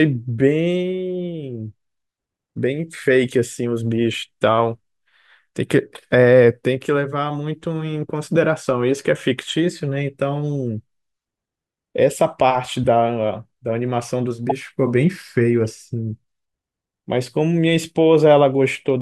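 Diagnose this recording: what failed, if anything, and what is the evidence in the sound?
The codec stage failed: corrupt frames were decoded and played. Brief chirps or noise bursts occur at 8.89 s, 12.84–12.86 s, 14.49–14.52 s and 15.64–15.67 s, each lasting a frame or two. The loudest, near 14.5 s, peaks around -5 dBFS. Unlike concealed packet loss, which fills gaps with smeared or repeated sound, misread bits put spurious energy at the wrong frequencies.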